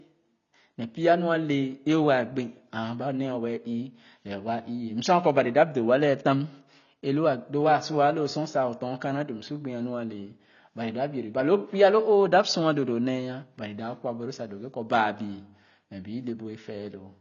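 Heavy AAC compression is the likely cause: the encoder appears to have run short of bits, so it discarded the upper spectrum and coarsely quantised what remained, which fits AAC-LC at a low rate around 24 kbps. From start to finish the speech has nothing above 7 kHz, leaving it dull and muffled, and the damage is plainly audible as a smeared, warbling texture on sustained sounds and a fizzy, unstable edge on sibilants.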